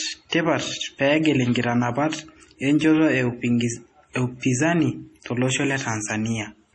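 Throughout, likely heavy MP3 compression at a rate fitting 32 kbps removes everything above 11.3 kHz and makes weak detail flicker, so speech sounds watery.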